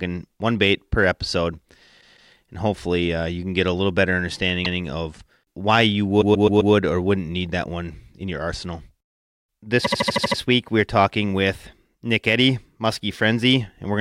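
Repeated frames stutter the speech four times. At 2.0 s, after "one bait per episode", a 0.16 s block plays twice more. At 4.64 s, after "get a little better", a 0.16 s block plays once more. At 6.21 s, a 0.13 s block plays four more times. At 9.84 s, before "week we're talking with", a 0.08 s block plays seven more times. In each case a duplicated run of compressed frames replays identical audio and lengthens the clip.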